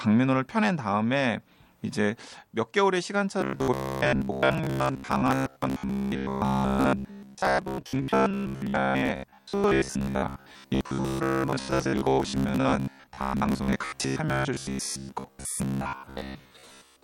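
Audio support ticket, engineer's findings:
Rigid metallic buzz at about 67 Hz from 3.41 s to end; speech contour followed only roughly. Robotic sound from repeated short buffers, likely audio starvation: roughly 15 ms blocks replayed, most real audio skipped.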